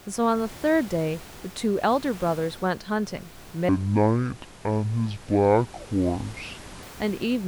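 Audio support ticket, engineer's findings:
Section at the wrong speed, 3.69 s to 6.83 s. Speech abruptly drops to 0.531x speed, slow and deep, pitch down about ten semitones, then snaps back at 6.83 s. Speed and pitch move together. Likely cause: playback or edit stage clocking that segment at roughly half rate. Room noise audible throughout, about 20 dB below speech.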